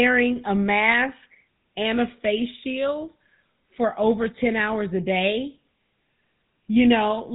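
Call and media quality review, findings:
GSM full-rate codec, throughout the speech. Buzzy, gravelly roughness; band cut at 4 kHz. A vocal-tract model driven by a coarse, regularly spaced pulse excitation, keeping every third sample. Damage plainly audible; fits 13 kbps full rate.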